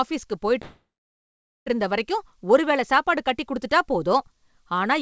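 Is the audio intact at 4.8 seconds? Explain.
Yes, the speech at 4.8 seconds is intact, with no dropout, glitch or other fault at that moment.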